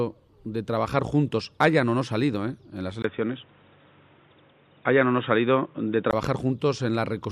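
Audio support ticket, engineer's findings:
3.02 to 6.13 s: sound turns dull and boxy, with nothing above 3.8 kHz. A 20 ms gap at the switch. Level shifts by about 5 dB. A new background noise sits around 40 dB under the signal. Full band returns at 6.13 s. Likely cause: input switched to a poorer device, such as a second microphone or a headset call profile. That device's narrower passband, tone and noise floor replace the original path's.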